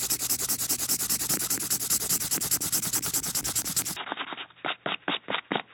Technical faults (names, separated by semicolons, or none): input switched to a poorer device